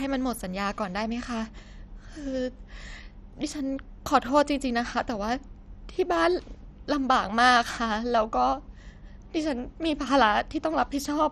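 Throughout, the speech sounds dull and gurgling, with nothing above 13.9 kHz. This is likely heavy MP2 compression, its starved upper sub-bands flickering off, consistent with roughly 56 kbps.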